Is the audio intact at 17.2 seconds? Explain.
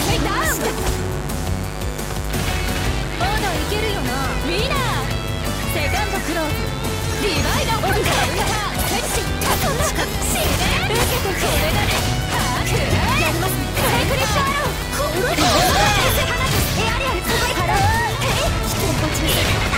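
No. A 50 Hz mains buzz runs through the whole clip, including 17.2 seconds: sharp switching spikes leak in twice per mains cycle, spraying harmonics up to several kHz. The result is a steady, raspy buzz sitting only about 10 dB below the sound.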